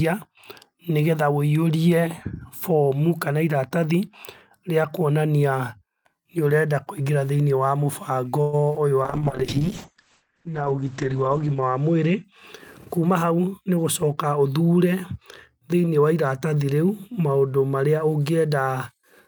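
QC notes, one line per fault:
8.41–8.55 s, call audio freeze: the sound stalls and the last moment is stretched into a fading buzz or hiss for about 115 ms, then picks up exactly where it stopped with nothing lost. This is likely delayed packets draining the jitter buffer, adding a gap rather than dropping audio.
8.73–8.76 s, short concealed packet loss: about 20 ms of audio never arrived, and the decoder covered roughly 13 ms of it by extending the preceding sound before crossfading back. It is heard as a brief smear or wobble, and the missing fragment is simply gone.
9.04–12.30 s, call bitrate drop: the encoder rate falls from 48 kbps to 9 kbps and stays at its lowest for about 2.6 s. The audio bandwidth shrinks from 20 kHz to 8 kHz, so the sound turns muffled and coarse, with watery artefacts until the rate recovers.
12.78–14.14 s, jitter buffer speed-up: the receiver trims short pitch-period segments repeatedly to shed excess buffered delay, removing around 150 ms in total. 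Playback runs at about 109% speed while pitch stays unchanged, so this stretch sounds hurried.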